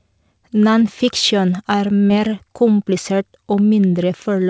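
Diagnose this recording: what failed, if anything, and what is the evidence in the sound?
The network stage failed briefly, causing a short concealed packet loss at 2.08 to 2.11 s. 20 ms of speech arrived too late to decode. The receiver continued the preceding sound for 15 ms, then blended back. The result is a brief smear or wobble.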